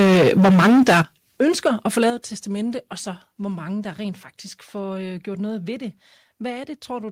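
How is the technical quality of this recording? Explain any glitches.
The recording has two recurring problems in its first couple of seconds: harsh distortion on loud passages, and sudden drops in level that follow it.

Microphone overload is heard from 0.0 to 1.01 s, then more briefly from 1.4 to 1.68 s and from 1.97 to 2.1 s. The speech sounds crackly and gritty, severely at the start and lightly later. The likely cause is input gain set too high, so peaks hit the converter's ceiling and their tops are sheared flat. At first the signal overshoots by about 12 dB, flattening something like 40% of the waveform. Later it overshoots by only about 2 to 3 dB, clipping just a sliver.

Microphone volume stepped down occurs at 1.02 s and again at 2.1 s. The speech and the background both drop abruptly, by about 9 dB each time, right after a distorted stretch. This is likely the call software detecting clipping and cutting the device's input gain in one jump rather than easing it down. 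That explains why the level falls in steps instead of smoothly.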